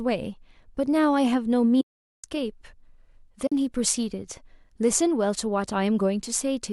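At 1.81 to 2.24 s the speech drops into a soft-edged silence, then again briefly at 3.47 to 3.52 s. That's AAC frame loss with muting. Lost frames, likely on a low-delay AAC link, are decoded as zero, so the sound fades out and back in.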